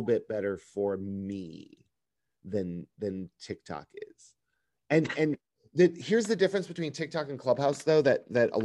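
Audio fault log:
Nothing stood out on listening to this speech recording.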